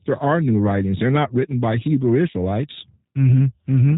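From start to finish, the speech carries the sound of the G.729 codec. The damage is plainly audible. Nothing reaches above about 3.8 kHz, so the top end is gone and sibilants lose their edge. The codec rebuilds each short frame from a vocal tract filter, a pitch predictor and a few pulses. That model replaces the real waveform. Voices come out rough and slightly synthetic. The thin texture fits a low rate around 8 kbit/s.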